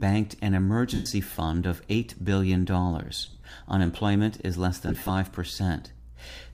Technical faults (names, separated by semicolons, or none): lost LE Audio frames